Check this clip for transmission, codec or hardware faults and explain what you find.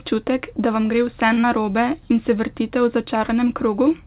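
Two transmission faults sit close together near 1.3 to 1.4 s. The audio has passed through a narrowband call path, and nothing is heard above 4 kHz.

From 1.33 to 1.38 s there is a short stall from a late packet. A packet arrived late, and the jitter buffer ran dry. The receiver held the last sound for about 42 ms until the packet came. It then resumed from the same point, so nothing is lost. The speech does not skip. It drags briefly, with a faint buzz or dip, and everything after it arrives about 42 ms later.

From 1.41 to 1.44 s there is a short concealed packet loss. About 20 ms of audio never reached the decoder in time. The receiver covered the gap with about 21 ms of made-up sound, extending what came just before. It then blended back into the real signal. The result is a quick smear or wobble in the speech.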